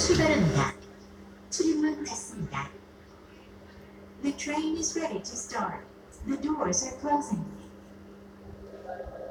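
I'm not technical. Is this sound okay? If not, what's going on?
Yes, no faults detected in this sound.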